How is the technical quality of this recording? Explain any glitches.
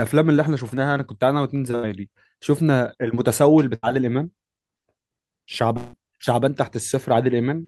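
Three network-related gaps interrupt the speech, so the technical quality is compromised.

From 1.75 to 1.85 s and again from 3.75 to 3.85 s, a burst of packet loss occurs. Roughly 80 ms of audio never arrived, and the receiver extended the preceding sound, decaying it, before playback resumed past the missing stretch. Each gap is heard as a short fading buzz or hiss.

From 5.77 to 5.95 s, the audio smears into a fading tail for about 160 ms, with no fully silent stretch, then jumps ahead. The likely cause is a long network dropout, where concealment stretched the last received sound across the loss.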